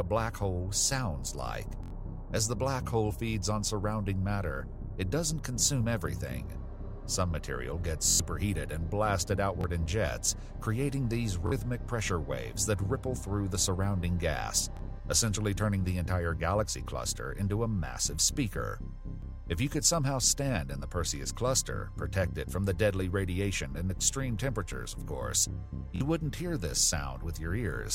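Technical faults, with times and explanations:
1.83–1.90 s, 8.10–8.20 s, 9.61–9.64 s, 11.47–11.52 s, 14.77–14.79 s, 25.96–26.01 s: repeated buffer. Each time new audio failed to arrive in time, the output replayed its last block of about 23 ms, which fits a 1024-sample buffer. The block plays one to four extra times (four at 8.10 s) with a hard join at each repeat, giving a short stutter. Roughly 20 to 100 ms of audio goes missing at each event.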